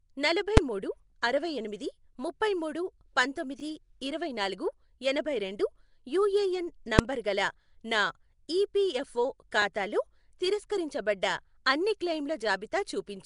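Throughout, the speech has a rough, hissy, smeared quality with nothing above 10.6 kHz, likely from Nellymoser compression, which shows as noise-filled gaps in the spectrogram's weaker bands. At 0.57 s and 6.99 s, invalid numbers at full scale give single loud bangs: flat blocks pinned to one extreme, about 5.3 ms and 1.3 ms long, appearing as bright vertical spectrogram lines. At 3.60 to 3.62 s and 9.62 to 9.64 s, six seconds apart, overlapping chunks replay 20 ms, heard as a stutter and visible as a repeated waveform stretch at each join.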